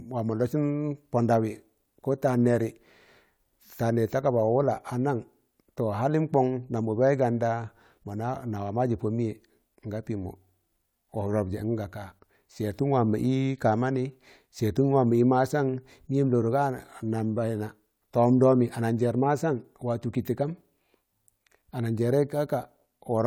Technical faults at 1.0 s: none

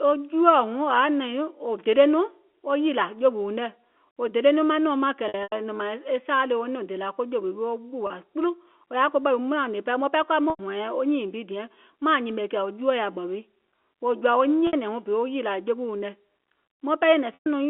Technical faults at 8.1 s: packet loss with pitch repetition

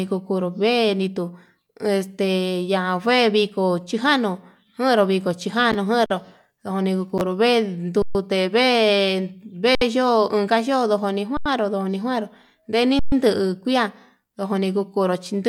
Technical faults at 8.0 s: underrun with held sample

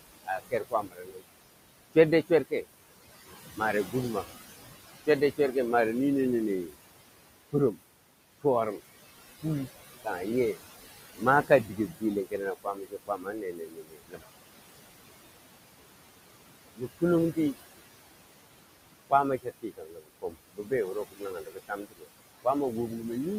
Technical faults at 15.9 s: noise suppressor artifacts

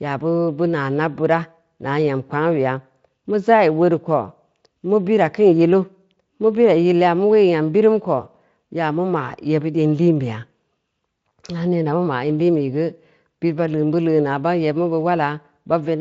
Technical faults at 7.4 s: none

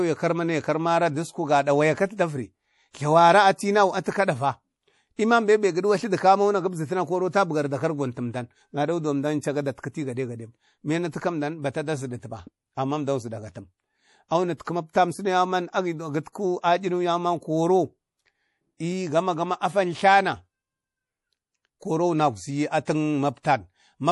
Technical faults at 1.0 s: MP3 compression

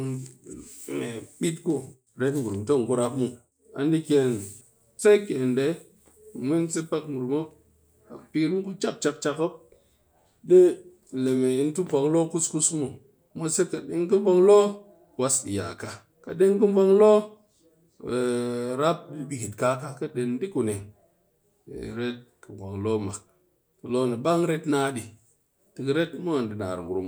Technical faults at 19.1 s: none

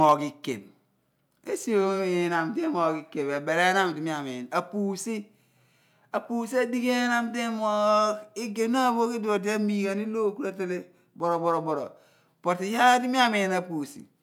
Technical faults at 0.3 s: none

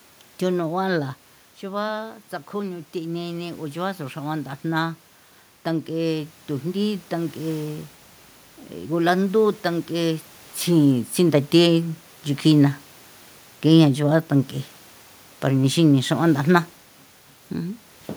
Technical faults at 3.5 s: automatic gain rising

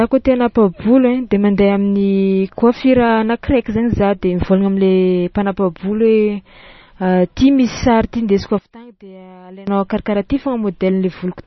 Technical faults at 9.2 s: MP3 compression; one channel inverted

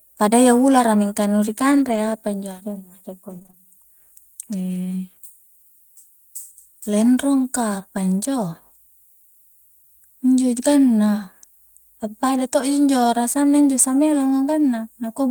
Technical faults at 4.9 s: none

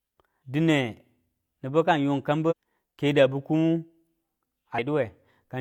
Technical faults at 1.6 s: none

